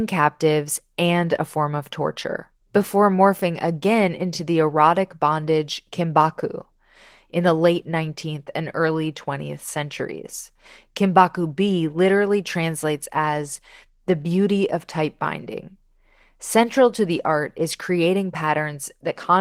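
No technical faults are audible anywhere in the speech recording.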